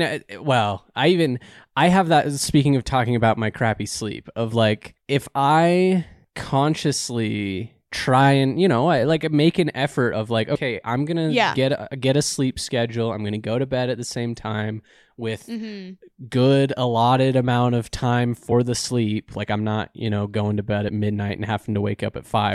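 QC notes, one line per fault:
10.54 s, compressed frames skipped: about three frames of the compressed stream were missing or rejected as damaged by the decoder, so roughly 70 ms of audio vanishes between "an effort of like" and "I'm gonna yeah get". The jump fits a frame of about 23 ms. Overlapping neighbour frames blend across the gap, leaving a short smeared blip rather than a click.
18.51 s, compressed frames skipped: about one frame lost, so roughly 20 ms disappears after "allotted amount of time", before "the sleep like I'm", with the same brief smear at the join.
20.88–20.90 s, compressed frames skipped: about one frame dropped right after "know going to bed", skipping roughly 20 ms and leaving a soft blurred blip.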